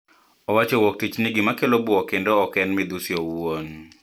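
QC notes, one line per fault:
No faults heard in this speech clip; nothing to log.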